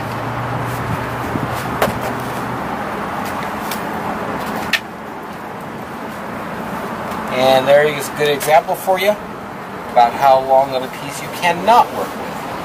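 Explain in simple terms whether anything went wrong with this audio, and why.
Hard clipping went wrong briefly, from about 9.98 to 10.59 seconds. During that stretch the signal got a little louder than one stage of the recording chain could handle, so the tops of the loudest moments were sliced off flat instead of rounding over naturally. Those squared-off peaks add sharp, high-pitched edges that weren't in the original sound, heard as a short burst of crackle on the peaks.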